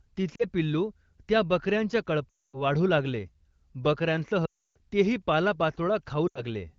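Speech clip with lost AMR speech frames at 0.36–0.45 s (just before "पिल्लू त्या बक यांच्या"), 2.30–2.62 s (right after it), 4.45–4.77 s and 6.28–6.45 s. Unlike hard dropouts, each drops to near silence within two frames, as wideband concealment does, then recovers rough.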